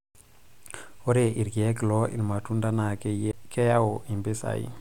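At 3.31 s the speech gives a small tick, drops out for a very brief moment, and picks up from a different point. This is a CD skip: a knock or a disc flaw threw the laser onto another turn of the spiral, so playback muted and resumed elsewhere.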